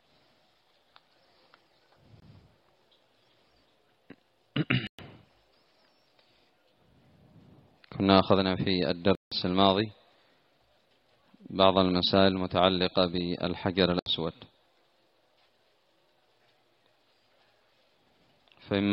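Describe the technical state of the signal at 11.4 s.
At 11.4 s the signal runs intact, with no dropout, distortion or other fault audible.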